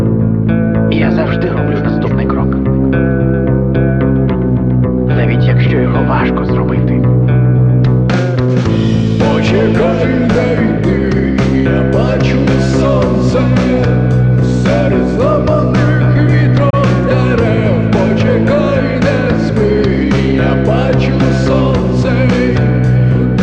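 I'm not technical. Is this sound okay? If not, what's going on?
No. At 16.70 to 16.74 s there's a digital broadcast dropout: the receiver quickly fades to silence and resumes about 24 ms later, which fits a single lost frame, rather than crackling.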